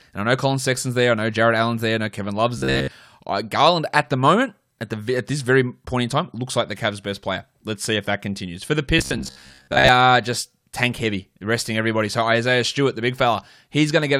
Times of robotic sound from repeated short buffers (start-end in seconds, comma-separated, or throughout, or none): 2.58-2.91, 8.99-9.89